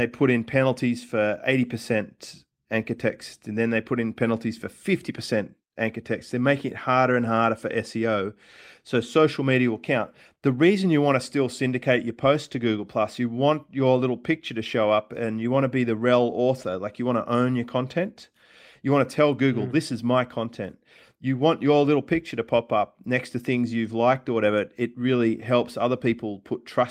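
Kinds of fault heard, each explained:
Nothing stood out on listening to the speech.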